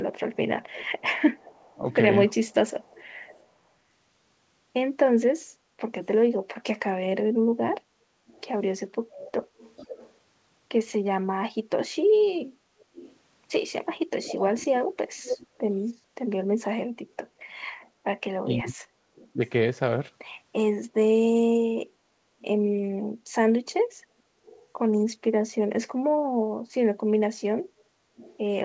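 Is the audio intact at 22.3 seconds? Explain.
Yes, the speech at 22.3 s is intact, carried cleanly through the WebRTC call path with its band ending at 8 kHz, which fits a G.722 codec at 64 kbps.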